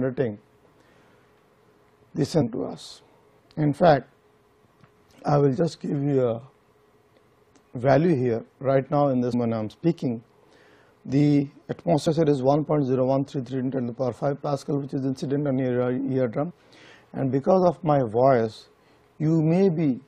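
Damaged data in the compressed stream at 2.40–2.42, 9.32, 12.06–12.08 and 16.50–16.52 s: corrupt frames throw the decoder out of sync, causing brief blips.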